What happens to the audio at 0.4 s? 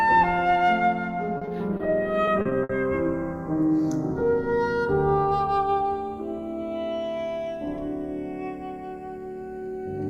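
At 0.4 s the audio is already showing channels drifting apart, a fault that runs the whole clip. The two channels sit on clocks that disagree by around 50 parts per million, so the gap between them creeps steadily, reaching only about half a millisecond by the end. Heard in mono, the comb-filter notches glide slowly downward through the spectrum, a slow flanging. Unlike a fixed inter-channel delay, the coloration keeps moving, and unlike a flanger effect it never sweeps back.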